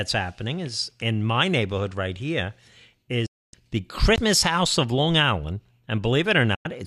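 At 3.26 s the speech fades within about 8 ms to silence and returns at 3.54 s, and the same happens again from 6.55 to 6.66 s. This is a digital broadcast dropout: the receiver lost valid frames and muted, and the 264 ms and 96 ms gaps suggest eleven and four lost frames of 24 ms each.

At 4.16 s there is a tick, a very brief mute of roughly 20 ms, and then the speech resumes from another point. This is a CD skip, where the laser jumped to a different turn of the disc's spiral.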